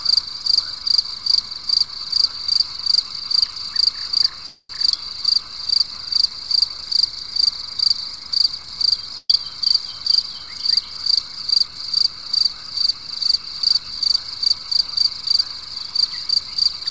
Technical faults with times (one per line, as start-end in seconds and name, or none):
4.46-4.71 call audio freeze
9.17-9.43 burst of packet loss